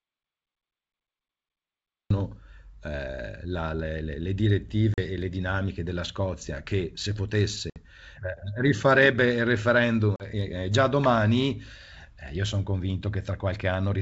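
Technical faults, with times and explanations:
0.00 to 2.11 s, audio dropout to silence: the recording opens in silence with no room tone, and the speech only appears at 2.11 s. This gap is most likely from an input that was lost or muted while recording continued.
4.94, 7.70 and 10.16 s, packet loss on an ADPCM call: hard-edged holes of about 40, 60 and 40 ms, each a few packets' worth, are filled with silence. The G.722 decoder's adaptive predictor and step size then lose sync with the sender, so speech returns slightly distorted before settling.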